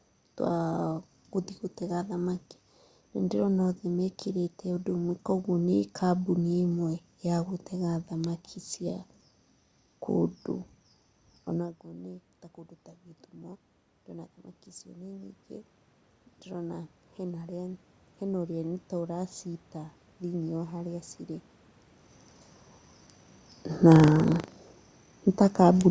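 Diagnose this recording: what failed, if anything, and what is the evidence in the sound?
Automatic gain rising shows up in the call processing from 13.3 to 21.04 s. The talker seems to move away around 11.5 s, and the level at the mic drops by about 18 dB. The AGC then slowly brings it back up, adding about 9 dB over roughly eight seconds. You can tell it's the gain and not the talker because the room noise swells right along with the voice as the gain climbs.

Buffer tearing happens at the driver or buffer stage from 23.88 to 24.69 s. It's a robotic buzz at 25 Hz, which points to a ring buffer period of about 40 ms, and it's only there while sound is present. The write and read pointers have slipped and cross each other every period. So a small sliver of each buffer replays audio from about 70 ms earlier, with hard splices on both sides, and that repeating seam is the rattle.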